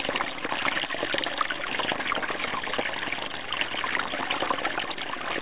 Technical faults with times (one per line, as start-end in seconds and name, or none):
1.71-4.13 block size mismatch (padded)